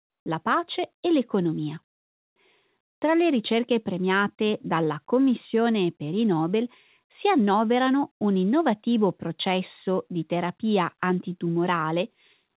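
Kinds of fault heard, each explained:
Comfort noise in place of the background: around "la pace e l'economia", pauses become steady, featureless noise, one about 27 dB quieter, likely from discontinuous transmission, unlike a gate's silence.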